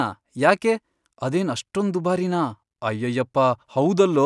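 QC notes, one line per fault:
No technical faults detected.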